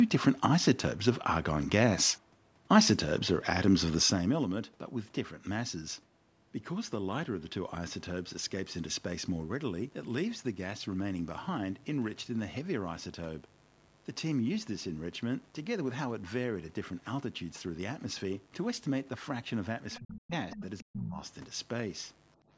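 Zipper noise, 4.02 to 4.52 s: a cut of roughly 10 dB arrives as a rapid train of tiny unsmoothed steps, about 150 a second, so a fine ticking rides on the sound as it drops.

Mains buzz, from 7.60 s to the end: a steady, raspy 50 Hz buzz, roughly 30 dB below the speech, whose spiky harmonics reach up into the few-kHz range, through a band that stops near 8 kHz.

Other side's voice leaking through, 19.92 to 19.99 s and 20.50 to 20.85 s: a second voice surfaces, about 20 dB and then about 10 dB below the main speech, likely loudspeaker echo the canceller failed to remove.

Speech suppressed in double talk, 19.99 to 20.32 s, 20.54 to 20.62 s and 20.83 to 21.19 s: the main speech dips by up to about 40 dB, about 20 dB in the short middle dip, likely the echo canceller ducking both voices during overlap.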